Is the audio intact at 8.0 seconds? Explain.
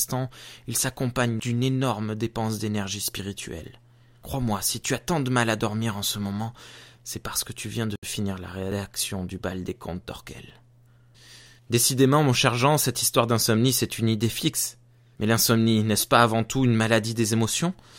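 No. Between 7.96 and 8.03 s there is a Bluetooth stall, likely caused by radio interference delaying packets until the headphones' buffer emptied and playback had to wait for retransmissions. The sound drops to about 70 ms of silence right after "que tu viens de" and resumes with "finir la rédaction du". The result is a brief, clean gap in the middle of the phrase.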